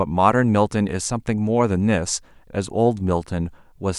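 Speech recording; no technical faults can be heard.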